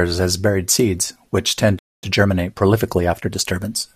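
At 1.78 s the player likely ran short of buffered data, or its output thread was held up, and this causes a playback stall: the speech cuts off in mid-flow and the output goes silent for about 0.24 s, until 2.04 s. When sound returns, the gap is clearly audible as an unnatural pause that falls where no pause belongs.

To recover the backlog built up by that stall, the player then shortens the audio from 2.04 s to 3.62 s by removing small slices and cross-fading across the joins. This time-compressed catch-up runs the speech at 1.15 times normal speed while keeping its pitch unchanged. The result sounds hurried rather than higher until playback settles back to its normal rate.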